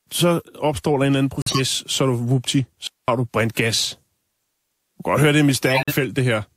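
At 1.41 to 1.60 s, just before "så du vupti", corrupt frame muted: damaged compressed frames were rejected and replaced with silence. The hole starts abruptly and fits about four lost frames. At 2.87 s a digital wireless dropout mutes the link for 210 ms, ending at 3.08 s, between "så du vupti" and "du gas". The receiver fades out quickly, leaving clean near-silence with no noise burst. At 5.66 to 5.93 s, after "høre det er mit", corrupt frame muted returns as a gap, which fits about six rejected frames.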